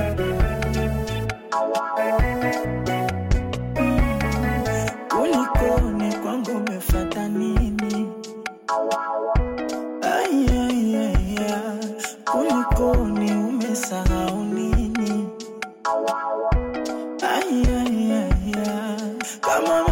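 No technical faults can be heard anywhere in the audio, and the signal stays steady and intact throughout.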